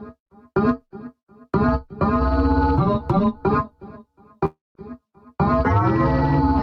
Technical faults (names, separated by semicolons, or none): long network dropout